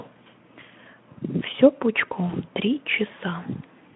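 Around 2.27 to 2.33 s there's a short dropout covered by VoIP packet loss concealment in the speech codec, which fits a single lost 20 ms frame. The Speex decoder bridges the gap by stretching its last pitch and filter at falling gain, so you hear a brief buzzy or noisy smear that dips, and the speech stays thin for a few tens of milliseconds afterwards.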